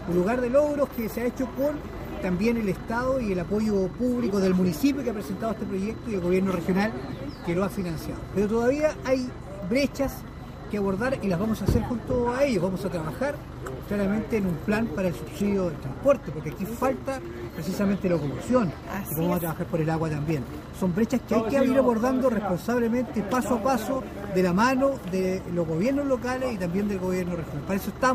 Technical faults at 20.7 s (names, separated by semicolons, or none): none